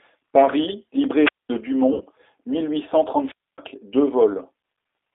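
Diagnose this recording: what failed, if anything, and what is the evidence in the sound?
The codec stage carries a G.729 codec at 8 kbit/s for the whole clip. The speech sits in a line band of roughly 300 Hz to 3.6 kHz and has a plainly rough, synthetic texture. That texture is what separates it from simple band-limiting: the model-based rebuild of pitch and filter leaves audible grain, not just missing treble.

At the analogue wireless link, two wireless microphone squelch dropouts occur, at 1.21–1.49 s and at 3.22–3.58 s, the second just after "mille huit cent". Each has a brief swell of hiss before a hole of near silence, lasting about 210 ms and 260 ms. The receiver mutes as the RF fades. The rising static before true silence distinguishes these from codec concealment.

On the network side, VoIP packet loss concealed by the speech codec appears at 1.94–2.02 s, just before "mille huit cent". 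About 60 ms goes missing, which fits two lost packets. Instead of silence or hiss, the decoder stretches the last sound into a buzzy tone or coloured noise that fades, and the following syllables come back weakened while its prediction recovers.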